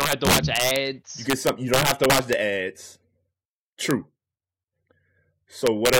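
Integer overflow cracks violently at 0.01–0.76 s, 1.3–2.33 s, 3.91 s and 5.67–5.99 s: peaks wrap to the opposite sign instead of flattening like clipping.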